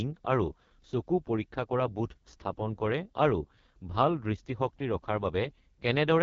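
From start to finish the speech carries heavy AMR wideband (HD Voice) codec damage, and the roughness points to the lowest rate, around 6.6 kbit/s. At that rate the coder's excitation pulses are too sparse to track the voice, so everything comes out raspy and gritty. Nothing reaches above about 7.1 kHz. The top band from 6.4 kHz up is just shaped noise standing in for real detail.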